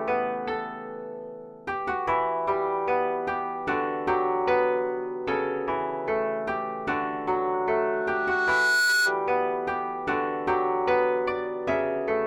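From 7.53 to 9.22 s a single tone at 1.5 kHz swells over roughly a second and a half until it sits around 5 dB above the rest of the sound. This is loudspeaker feedback squeal: a microphone hearing its own loudspeaker, with loop gain above one at that frequency.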